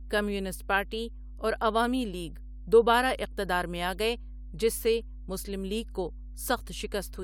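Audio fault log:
throughout, mains hum: a steady 50 Hz tone with low harmonics sits about 15 dB under the speech, coupled from the power line; unlike rumble, its pitch never wavers.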